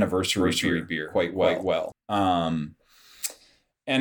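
A second capture path likely caused this doubled audio track from 0.40 to 1.92 s: an equally loud copy trails about 300 ms behind.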